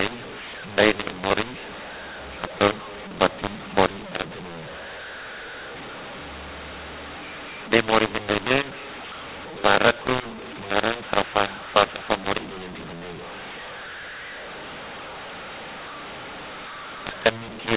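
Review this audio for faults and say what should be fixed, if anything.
The whole clip has a mu-law and A-law mix-up: the speech was written as A-law but read back as mu-law, so every 8-bit code lands on the wrong point of the logarithmic curve. Levels come out scrambled, the voice turns harsh and gritty, and the quietest samples get pushed up well off zero, so the pauses hiss instead of going silent. To fix it, make sure the decoder's G.711 law is set to match the encoder's, here A-law on both ends.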